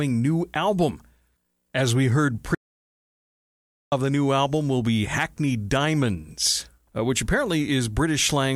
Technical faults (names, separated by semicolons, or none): audio dropout to silence